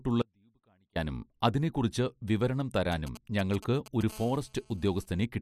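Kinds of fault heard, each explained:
Audio dropout to a faint residue: from 0.22 to 0.96 s the speech vanishes abruptly for about 0.73 s, leaving only a faint trace about 40 dB down, until "അതിനെക്കുറിച്ച് വിവരണം" returns. This is most likely a break in the wanted signal while the path downstream stayed live.
GSM signalling bursts: from 2.92 to 4.12 s, after "അതിനെക്കുറിച്ച് വിവരണം", a galloping dit-dit-dit of brief 217 Hz buzzes sits about 15 dB below the speech. A nearby 2G phone is exchanging short signalling bursts, and the audio circuitry rectifies each radio pulse.
GSM phone buzz: from 4.12 to 5.06 s there is a continuous, harsh, harmonic-rich buzz at 217 Hz, about 26 dB under the speech. A nearby 2G phone is in a call, transmitting bursts 217 times a second that the circuit demodulates into this tone.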